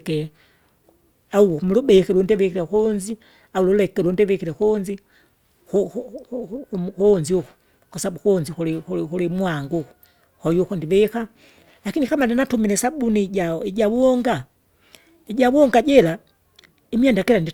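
A filter restarted on every block runs throughout this speech, dropping its state each block so a 50 Hz buzz of ticks tracks the loudness.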